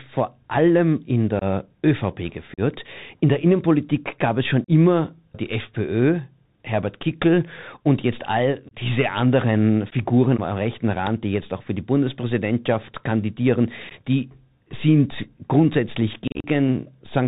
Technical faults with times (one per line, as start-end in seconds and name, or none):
0.00-17.27 Bluetooth CVSD headset codec
1.39-1.43 unconcealed Bluetooth headset packet loss
2.54-2.60 unconcealed Bluetooth headset packet loss
4.64-4.69 unconcealed Bluetooth headset packet loss
8.69-8.74 unconcealed Bluetooth headset packet loss
9.90-9.93 unconcealed Bluetooth headset packet loss
11.07 uninitialised buffer
13.89-13.92 unconcealed Bluetooth headset packet loss
16.27-16.47 unconcealed Bluetooth headset packet loss